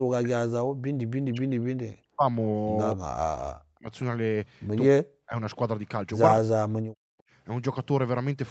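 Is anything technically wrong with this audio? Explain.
Yes. Speech suppressed in double talk occurs at 1.3 to 2.26 s, 2.93 to 3.9 s, 4.94 to 5.37 s and 6.39 to 7.19 s. The likely cause is an echo canceller mistaking overlapping far-end sound for its own echo and clamping the near talker. The voice drops by roughly 40 dB there, nearly vanishing in pieces, with the content above 8 kHz already gone through the call path.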